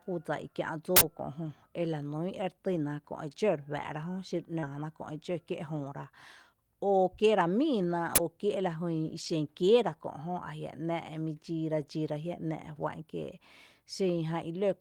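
Uninitialised buffer faults hit this speech at 0.96–1.01 s, just before "kö’ jö ela", and again at 8.16–8.18 s. Blocks of 46 ms and 23 ms were played before any audio was written to them, so leftover memory came out as a loud crack or burst of digital noise. Their lengths fit 2048- and 1024-sample buffers. Lost packets rebuilt from error correction roughen the sound at 1.45–1.51 s (right after "kö’ jö"), 2.75–2.81 s, 4.62–4.68 s, 5.76–5.86 s, 6.88–6.90 s, 9.22–9.28 s (just before "kieera kö’") and 11.82–11.88 s. The decoder played the low-bitrate backup copies carried in the following packets, so there is no gap, only 20–60 ms stretches that are grainier and noisier. Short concealed packet loss smears the audio at 4.59–4.70 s. About 40 ms never arrived in time, and the receiver filled 30 ms of it by extending the preceding sound before blending back, which leaves a brief wobble and a slight stretch in timing.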